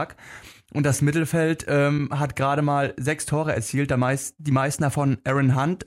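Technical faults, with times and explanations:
1.98 s, corrupt frame decoded: a short blip lands just before "hat gerade mal sechs", peaking somewhere around -15 dBFS. A couple of compressed frames seem to have had bits flipped, and the decoder played them anyway. Misread gains and spectral codes scatter energy into frequencies that don't belong there, and because the damage lasts only as long as those frames, it comes across as a quick chirpy squeak rather than sustained noise.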